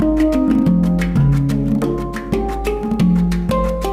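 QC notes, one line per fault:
No faults found.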